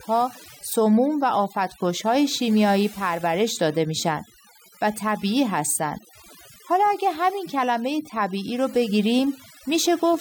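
Speech throughout with overdone noise removal: pauses fall to near silence dotted with twinkling specks, and quiet parts of the voice vanish with the noise. Unlike a noise gate, which cuts everything at once, single frequency bands drop out independently.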